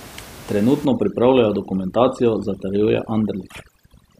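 From about 0.85 s to the end, you get overdone noise removal: the reduction is set so hard that bands near its noise estimate get pulled right down, so the room noise, about 20 dB under the speech, collapses into twinkly near-silence.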